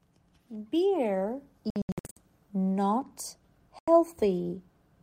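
Bluetooth dropouts at 1.70 to 2.17 s and 3.79 to 3.88 s: the sound cuts to silence, likely because packets missed the headphones' deadline. The first is a cluster of short holes totalling 334 ms, the longest 73 ms; the second is one 87 ms gap. Each time, playback resumes further on, as though it had continued unheard.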